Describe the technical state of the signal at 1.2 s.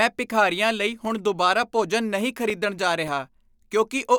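At 1.2 s the speech is inside a run of CD scratch ticks, from 1.05 to 3.37 s, just after "ਭਿਖਾਰੀਆਂ ਲਈ". A surface scratch beats the error correction once per disc turn, so the player patches the data and nine brief ticks of a few milliseconds result, about four a second. That steady spacing separates them from vinyl's random clicks.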